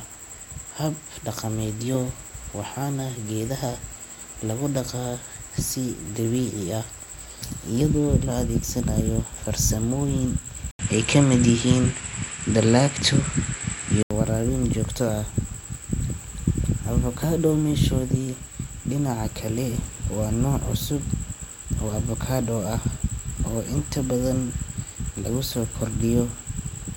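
A speech recording in which, from 10.71 s to 14.11 s, the sound turns duller and shifts in level by a few decibels, with a faint new background noise well below the speech. An 80 ms gap opens at the switch. The likely cause is the input switched to a poorer device and back. On a spectrogram, energy is cut off above 11.2 kHz for that span. The waveform shows the brief flat gap and a changed amplitude envelope.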